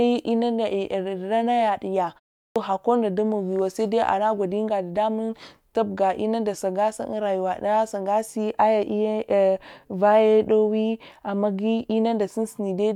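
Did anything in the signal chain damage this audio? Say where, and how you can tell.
Yes, at playback: a clipped start after a pause at 2.43 s. The waking output device swallows 127 ms after a 0.32 s gap, so the waveform leaps abruptly from silence.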